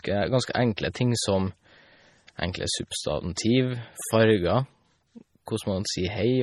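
Right from the start, the whole clip sounds like heavily squeezed lossy audio, most likely MP3 compression. Nothing comes through above about 14.2 kHz, and the speech has that watery, swirly quality you get when the encoder starves weak frequency lines and they flicker in and out from frame to frame. S sounds turn metallic and chirpy. The damage is heavy enough to fit a low bitrate somewhere around 32 kbps.

At 0.53 s there's pre-echo: a smear of hiss lands just ahead of a sharp onset, spread over about 16 ms, and the attack itself loses its snap. The codec spreads its quantisation noise across the whole block, so noise meant to hide under the loud onset leaks into the quieter moment before it. It happens again at 3.35 s, this time spread over about 19 ms, with the same soft, blurred edge on the attack.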